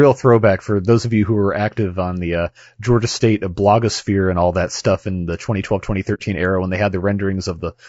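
From start to finish the speech sounds rough and grainy, most likely from low-delay AAC compression at a low bitrate, consistent with about 32 kbps. Short coding frames resolve pitch harmonics poorly. A spectrogram shows noise filling the gaps between harmonic lines and a thin, synthetic-looking top band.

From 6.14 to 6.21 s, just before "era when they", there is AAC frame loss with muting. The decoder zeroed the missing spectrum, which fits two lost frames. It leaves a soft-edged silent hole, faded out and back in, visible as a tapered gap in the waveform and a blank vertical strip on the spectrogram.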